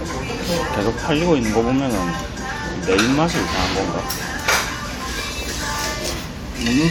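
No technical faults turn up anywhere in this audio. There is nothing here that needs a time, a cause or a description of how it sounds.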